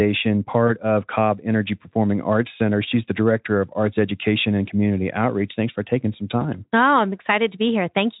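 Brief buzzy or noisy smears with a dip in level at 0.67 to 0.71 s, 4.66 to 4.68 s, and 6.40 to 6.44 s after "for taking some" are VoIP packet loss concealed by the speech codec. The decoder stretched its last pitch and filter across a 20 ms gap, which fits one lost frame.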